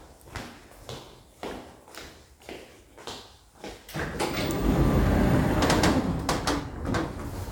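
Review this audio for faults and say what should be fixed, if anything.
Regular clicks about every 1.14 s from 0.76 s to 6.48 s, likely clock drift buffer slips: two clocks differing by roughly 1000 ppm, so the buffer drops or repeats a few dozen samples per slip. The steady spacing distinguishes it from random dropouts. Prevent it by locking both devices to one clock or adding adaptive resampling.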